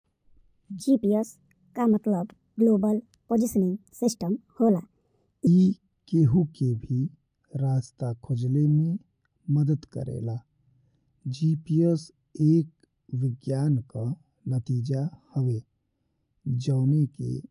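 From 0.80 to 5.47 s, wrong sample rate: speech runs 1.45 times fast and 6.45 semitones high, fitting 22 kHz audio played at 32 kHz. On a spectrogram, the harmonics shift upward and the syllables are squeezed together in time.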